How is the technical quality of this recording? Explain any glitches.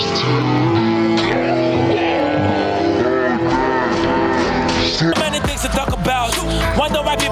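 The recording has two faults.

Gain pumping runs through the whole clip. The gain swings by roughly 5 dB. The likely cause is input gain set too high, with a fast limiter pulling it down. Dynamics sound squashed.

A section at the wrong speed runs from 0.0 to 5.12 s. It plays at about 0.51 times normal speed, roughly ten semitones low. Speed and pitch fall together, so the sound is deep and dragging. A clock mismatch during playback or editing is the likely cause.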